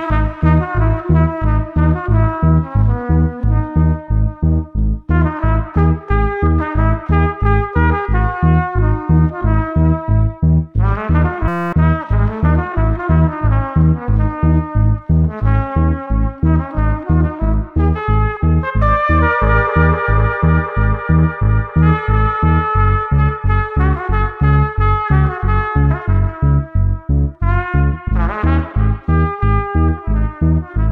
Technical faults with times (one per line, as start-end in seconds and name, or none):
11.48-11.73 system hang loop